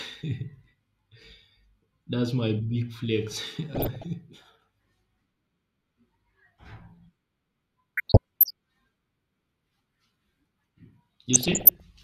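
DAB burbling at 3.75–4.06 s, 7.97–8.51 s and 11.33–11.80 s: uncorrected bit errors corrupt sub-band data, putting short noise blips over the speech.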